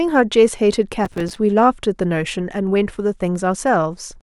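From 1.05 to 1.36 s the speech breaks into processor overload crackle. The processor kept missing its buffer deadlines, and each miss dropped in a brief silent gap with hard edges. Roughly a dozen or more dropouts, consistent with buffers of around 5 ms, merge into a gritty tearing texture.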